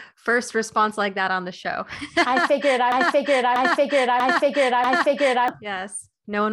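Right after "figured I", at 2.92 s, the speech locks into a broken-record loop: a 0.64 s fragment plays four times back to back until 5.48 s, each pass identical, so the phrase stutters mechanically and whatever should have followed is simply missing. The likely cause is a player or stream stall that kept resending its last buffered chunk. On a spectrogram or waveform, four identical blocks sit side by side at a fixed 0.64 s spacing, with abrupt seams where each copy restarts.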